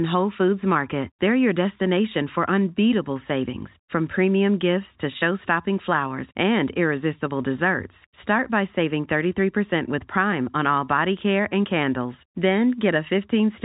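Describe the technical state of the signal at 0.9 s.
At 0.9 s the speech is intact, with nothing but the ordinary G.711 telephone coding at work, which leaves no content above about 3.8 kHz.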